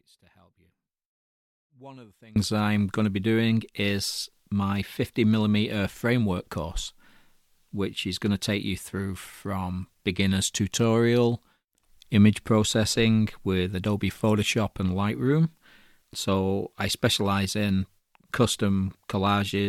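From the first moment to 2.36 s the speech is in an audio dropout to a faint residue, already under way when the clip begins. Only a faint sound, roughly 30 dB down, remains, likely because the feed was lost while the path stayed live. The waveform is a thin sliver that jumps abruptly to normal height, and the spectrogram shows pale traces before dense energy appears.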